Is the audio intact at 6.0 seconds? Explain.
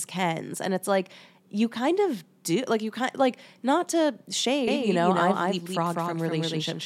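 No. At 6.0 s a doubled audio track is present. It starts abruptly at 4.68 s, just after "kind like not to", and runs to the end. A second copy of the speech, likely captured again by a slower path, is mixed in about a fifth of a second late and roughly 5 dB quieter. The result is a dry, full-band echo trailing every syllable.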